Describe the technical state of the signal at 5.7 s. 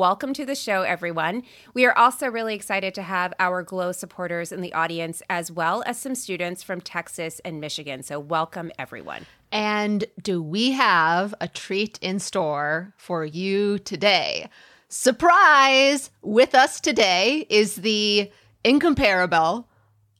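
At 5.7 s the signal is intact, with no audible technical fault at that moment.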